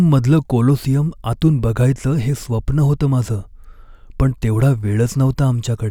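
No technical faults can be heard anywhere in the recording, and the signal stays intact throughout.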